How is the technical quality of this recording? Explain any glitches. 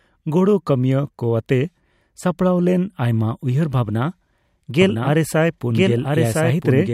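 The recording has one glitch near the end. A doubled audio track starts abruptly at 4.82 s and runs to the end. The same speech is mixed in a second time and trails the original by about a second, at roughly 5 dB lower. The second copy was likely captured by a slower path or left out of step by an edit. It is full-band, with no decay or room colour, so it sounds like overlapping speech rather than an echo.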